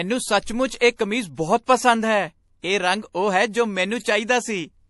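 Throughout the speech, the treble stops dead at 11.5 kHz. Sibilants sound swirly and watery, and attacks are smeared. This is plainly audible damage, likely from MP3 compression at a low bitrate, around 48 kbps, starving weak frequency lines.

Pre-echo appears three times. From 0.79 to 0.81 s, just before "ਇਹ ਕਮੀਜ਼", a hiss of about 24 ms runs ahead of an attack. From 0.96 to 0.99 s, after "ਸੱਚਮੁੱਚ ਇਹ", it lasts 33 ms. From 1.35 to 1.38 s, after "ਸੱਚਮੁੱਚ ਇਹ ਕਮੀਜ਼", it lasts 28 ms. In each case, noise sized for the loud onset leaks into the quiet moment before it, which softens the attack.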